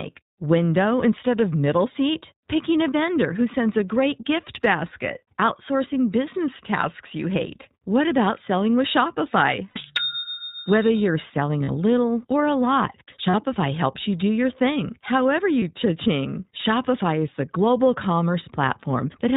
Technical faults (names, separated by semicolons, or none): iLBC codec; lost iLBC frames